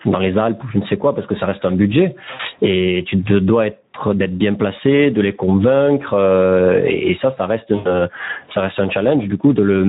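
Across the whole recording the level swings up and down with the speech, so loud and quiet passages sit unnaturally close in level and the speech sounds squashed. This is gain pumping. The likely cause is input gain set far too high for the microphone, with a fast limiter or compressor pulling the level down on each loud syllable, a swing of roughly 20 dB between gaps and speech.

Throughout, the speech is also hoarse and grainy, with a hiss-like texture where the crisp upper consonant detail should be. That is the Speex codec working at a low quality setting, which fits a bitrate of about 11 kbps. At that level the CELP coder has too few bits to describe the excitation, so the voice loses its natural buzz and the upper band becomes shaped noise rather than real detail.

From 2.33 to 2.43 s, just after "ça reste un budget", the sound smears and fades. This is VoIP packet loss concealed by the speech codec. 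The decoder repeated its last pitch and filter while lowering the gain, which fits about 60 ms of missing audio. The same thing happens from 7.75 to 7.91 s, between "et ça ça reste" and "ça reste un", with roughly 100 ms lost. Here the voice stays weak and distorted for a moment after the audio resumes, because each decoded frame builds on the damaged one before it.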